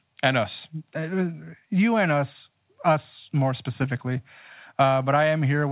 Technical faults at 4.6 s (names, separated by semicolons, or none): none